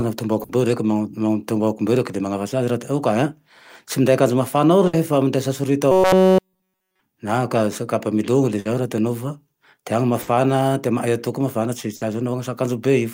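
Bursts of packet loss at 0.43, 4.87, 8.59, 10.21 and 11.95 s each fill about 60 ms with a held, fading continuation, then skip about 60 ms of speech. From 5.92 to 7.00 s, robotic sound from repeated short buffers turns the speech into a rigid metallic buzz at 188 Hz, likely from roughly 5.3 ms blocks being repeated throughout.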